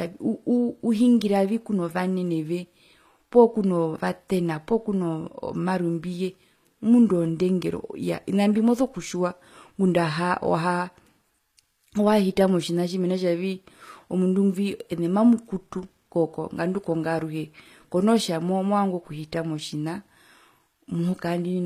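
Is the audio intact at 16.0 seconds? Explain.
No. HE-AAC compression runs through the whole clip, so 16.0 s is affected. The treble is likely rebuilt from copied lower bands, fitting roughly 24 kbps. Sibilants sound gritty and metallic, with nothing above 14.9 kHz.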